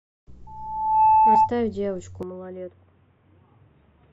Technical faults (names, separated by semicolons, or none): loudspeaker feedback squeal; compressed frames skipped; input switched to a poorer device